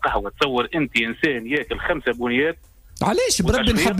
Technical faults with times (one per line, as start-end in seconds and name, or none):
0.08-3.56 periodic USB or driver dropouts